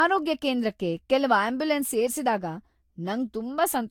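Generation loss throughout: the speech was likely re-encoded about four times with a lossy codec near 70 kbit/s, so quantisation noise compounds into swirling, hollow, smeared sound with blurred attacks and nothing above 19.3 kHz.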